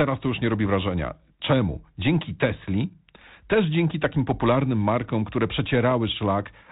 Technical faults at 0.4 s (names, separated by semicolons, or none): none